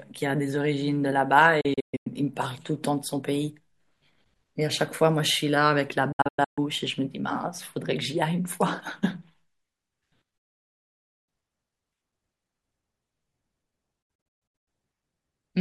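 Speech with four digital broadcast dropouts, where the receiver lost the stream or rejected corrupt frames and muted until clean ones arrived. Short fades of about 8 ms lead into silence at 1.61–2.07 s, 6.12–6.58 s and 14.02–14.68 s, each a scatter of gaps no longer than 128 ms, fitting 32 ms frames. At 10.38–11.29 s there is one solid 0.9 s hole. Spectrograms show blank full-band columns; waveforms go flat.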